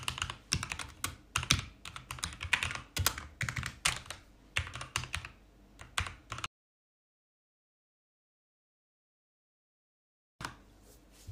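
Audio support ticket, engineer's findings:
Audio dropout to silence, 6.46 to 10.41 s: about 3.9 s of silence, no room tone, sound cut off mid-flow and back abruptly. Likely input lost upstream (device dropped, link failure or stray mute) while recorder kept writing. Missing content unrecoverable.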